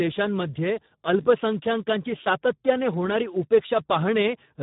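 From start to finish the speech carries heavy Speex codec damage: a low-quality CELP setting, fitting roughly 8 kbps, starves the excitation, leaving the speech hoarse and noisy. A spectrogram shows smeared harmonics and nothing above 3.8 kHz.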